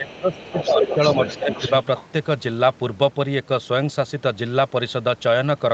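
A speech clip, band-limited to 8 kHz as a call path would leave it. It shows speech suppressed in double talk. From 0.0 to 0.99 s the voice sinks by as much as about 20 dB, and it dips again by about 10 dB between 1.37 and 1.5 s. This is likely an echo canceller turning everything down while both sides talked. The other side's voice is also leaking through. A second voice sits about 10 dB under the speech from 0.33 to 0.66 s, then about 5 dB under it from 0.82 to 2.04 s. That is likely leftover loudspeaker echo the canceller did not remove.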